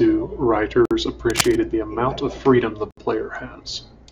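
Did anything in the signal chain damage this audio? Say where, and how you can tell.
Yes. Separately encoded segments were joined without trimming encoder delay and padding. Silences open in continuous speech at 0.85 to 0.91 s (54 ms) and 2.91 to 2.97 s (67 ms), just after "amount of freedom the", spaced 2.0 s apart, with smeared edges.

In the analogue wiring, a worn cable or connector likely shifted its contact resistance. From 1.30 to 1.56 s, just before "the amount of freedom", dense, uneven scratching bursts ride over the speech at about 5 dB below the signal.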